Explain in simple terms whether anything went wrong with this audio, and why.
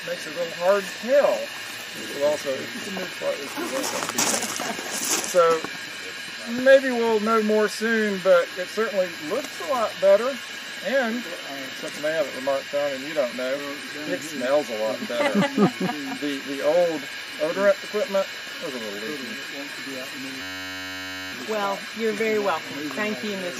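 From 20.42 to 21.32 s a system hang loop occurs: the computer froze, replaying one 10.67 ms snippet as a steady 94 Hz buzz, and about a second of audio was lost.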